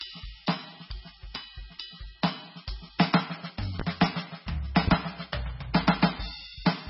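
MP3 compression runs through the whole music clip: the audio is heavily degraded and nothing reaches above 5.6 kHz. That fits a very low bitrate around 16 kbps, likely starving the encoder so that it drops weak frequency lines frame by frame and cuts the treble. A loud pop, two in quick succession, lands between 3.80 and 4.07 s, standing well above the music, which continues underneath. This is likely a sudden voltage step or pulse from a plug, switch, static or driver glitch, added to the signal.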